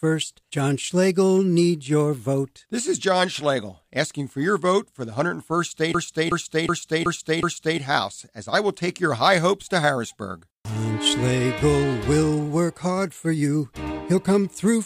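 From 5.94 to 7.80 s, a system hang loop: the system froze while the hardware replayed one 0.37 s stretch (fitting a 16384-sample buffer) five times at 2.69 Hz. It sounds like a rhythmic stutter, and the waveform and spectrogram show identical repeated blocks.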